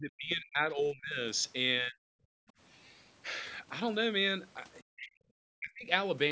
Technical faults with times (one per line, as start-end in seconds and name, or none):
0.00-1.20 speech suppressed in double talk
1.81-2.10 speech suppressed in double talk
2.38-2.54 background gated by the echo canceller
4.90-5.22 speech suppressed in double talk
5.59-5.88 speech suppressed in double talk